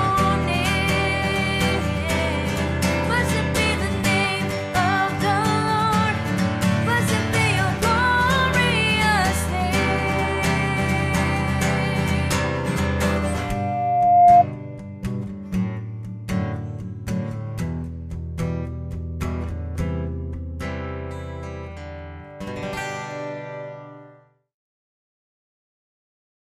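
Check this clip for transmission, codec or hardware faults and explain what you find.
One fault: a loudspeaker feedback squeal from 13.26 to 14.44 s. A single tone at 707 Hz emerges and swells over about a second until it sits roughly 10 dB above the surrounding audio. The microphone was picking up its own loudspeaker, and at 707 Hz the round-trip gain exceeded unity, so that frequency reinforced itself on every pass.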